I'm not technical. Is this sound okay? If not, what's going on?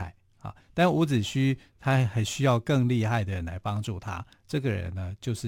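Yes, this one's fine: nothing in the recording is going wrong, so there's nothing here to worry about.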